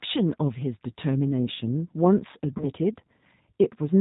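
Throughout the speech, the G.729 codec is plainly audible. The sound is band-limited with nothing above 4 kHz, and it has the slightly rough, synthetic texture of a voice rebuilt from a vocal tract filter, a pitch predictor and a handful of pulses per 5 ms subframe, rather than the original waveform. That character is consistent with the 8 kbit/s G.729A variant, a reduced-complexity version of the same codec.

From 2.58 s to 2.67 s there is VoIP packet loss concealed by the speech codec. About 20 ms of audio went missing, which points to a single lost packet. The decoder filled the gap by extending its last pitch and filter state at decaying gain, so the speech smears into a buzzy tone or coloured noise that fades. Because each frame's prediction builds on the previous one, the voice stays weak or distorted for a further stretch after the packets resume, giving the disturbance its roughly 90 ms span.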